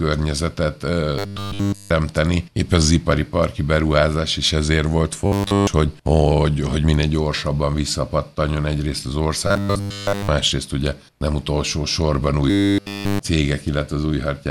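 Audio reaching the playback side too seldom, so that a short buffer is replayed over and over in place of fresh sound, is the likely source of the robotic sound from repeated short buffers heard at 1.19 to 1.91 s, 5.26 to 5.68 s, 9.47 to 10.29 s and 12.50 to 13.19 s. In each stretch essentially all the sound is a repeat, locked to a rigid, metallic 100 Hz buzz, which fits a loop of about 10 ms.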